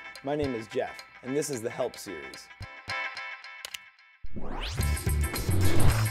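No technical faults can be heard anywhere in this audio. Nothing in the sound needs a timestamp or any correction.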